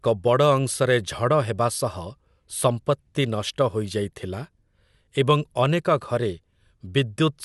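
No technical faults occur in the speech, so there is nothing to describe in time order.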